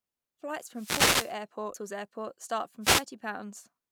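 At 0.0 s the compressed speech stream carries damaged data: bytes in a frame are corrupt, so the decoder misreads it, loses frame sync and hunts for the next valid header. The result is a brief glitch right at the start as playback resumes at the next good frame. The same damaged data in a compressed stream recurs at 1.74 s, again a short glitch.

Between 0.73 and 1.38 s the analogue FM radio link of the wireless microphone fades as reflected paths cancel the signal, and receiver noise climbs into the gap. This wireless microphone noise hit sounds like a swish of static washing over the voice for a little over half a second. A second, shorter hit from 2.81 to 3.05 s brings another quick burst of hiss as the signal dips again.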